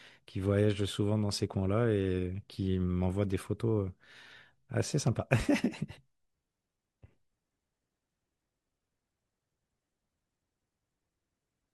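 No technical faults can be heard anywhere in the recording; the signal stays steady and intact throughout its duration.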